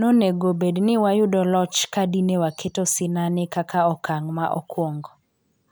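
No technical faults can be heard anywhere in this speech recording. Nothing in the audio stands out as a defect at any point.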